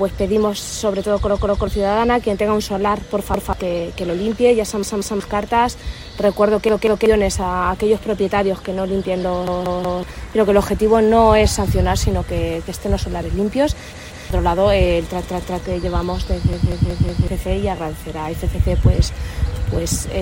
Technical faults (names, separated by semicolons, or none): repeated buffer